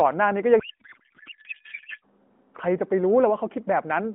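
From 0.60 to 2.04 s the speech gives way to garbled noise and warble that barely tracks it, a codec payload misread. The AMR narrowband stream, whose light coding texture fits the 12.2 kbps mode, was packed octet-aligned but unpacked as bandwidth-efficient. The decoder therefore takes the padding and header bits as part of the speech parameters, and every field after them lands in the wrong slot. Clean speech returns at 2.04 s, when both ends use the same packing again.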